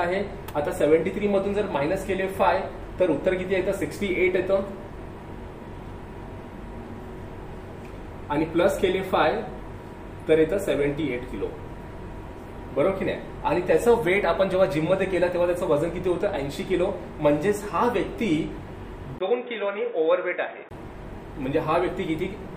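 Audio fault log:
19.18–20.71 s input switched to a poorer device. After a 20 ms gap, the sound turns dull and boxy, with nothing above 3.8 kHz. It drops about 10 dB, and a faint new noise floor appears. Likely a narrower-band microphone took over.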